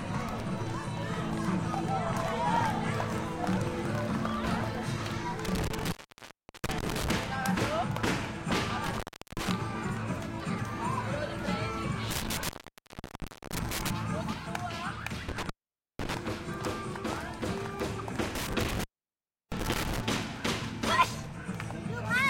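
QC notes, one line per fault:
5.45–7.11 s, 8.86–9.50 s, 12.11–13.91 s, 15.29–16.15 s, 18.35–20.00 s: intermittent contact. A loose cable or plug keeps breaking and remaking the signal path. Each time the connection opens, the sound drops out for about 0.72, 0.37, 1.04, 0.50 and 0.68 s respectively, leaving faint hiss. As the contact scrapes open and shut, it produces a burst of crackle at the start and end of each gap.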